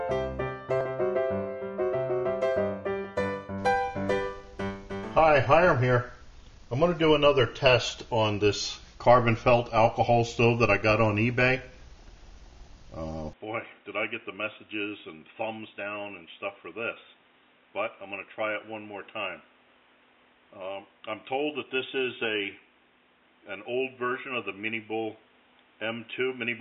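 At 13.33 s the sound abruptly turns dull and boxy with no gap, which is likely the input switched to a poorer device. From there to the end nothing gets through above 3.8 kHz, the level falls by roughly 10 dB, and a new noise floor sits roughly 30 dB down.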